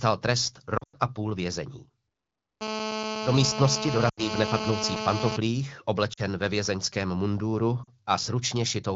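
Speech carried over the AMR wideband (HD Voice) codec is marred by lost AMR speech frames at 0.77–0.97 s (just before "a půl vězení"), 4.09–4.31 s, 6.13–6.20 s (just before "ve vězeňském munduru") and 7.84–7.90 s (right after it). Corrupted frames failed their checksum, so the decoder stretched the last good pitch and vocal tract settings with falling gain, leaving short warbles and dips. The first event loses 140 ms scattered over 160 ms. GSM phone buzz runs from 2.61 to 5.37 s as a steady, raspy 217 Hz buzz with dense harmonics at about 5 dB below the speech. It comes from a nearby phone on a call whose radio bursts are rectified by the audio circuitry.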